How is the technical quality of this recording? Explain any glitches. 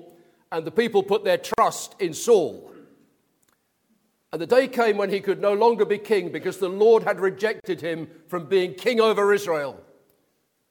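Two brief dropouts break the continuity: a gap at a join of encoded pieces at 1.54 to 1.58 s (about 43 ms) and another at 7.60 to 7.64 s (about 41 ms). Each sounds like a sudden hole in continuous sound, with smeared edges, after which the audio resumes exactly where it stopped. The segments were encoded separately and concatenated without trimming, so each encoder's start-up delay and final-frame padding remain as silence at the seams.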